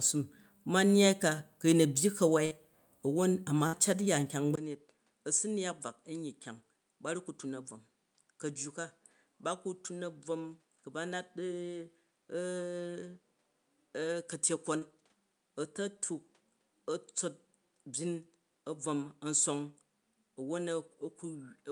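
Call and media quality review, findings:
Burst of packet loss, 2.45–2.53 s, right after "a̱ byyi". Last sound held about 55 ms, fading, then roughly 60 ms of audio skipped. Jitter buffer/PLC. Spectrogram: frozen stripes tapering out, then abrupt resumption.

Burst of packet loss, 3.67–3.75 s, just before "a̱ cat ya nkyang". Same pattern: about 59 ms concealment fade, 60 ms missing. Waveform: decaying held fill, hard cut back to live signal.

Input switched to a poorer device from 4.55 s, after "a̱ cat ya nkyang". Likely capture route change. 20 ms silence, then duller, about 10 dB quieter. Spectrogram: content above 10.5 kHz vanishes; new noise floor around 40 dB under signal.

Short concealed packet loss, 14.79–14.83 s. About 25 ms synthesized fill over a 20 ms hole, heard as a brief smear. Decoder PLC. Spectrogram: short blurred patch; waveform: envelope wobble.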